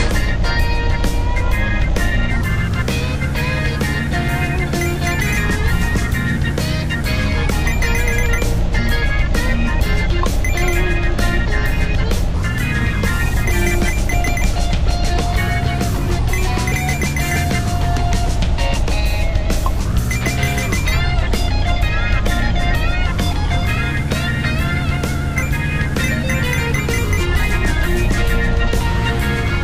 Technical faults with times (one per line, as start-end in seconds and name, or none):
none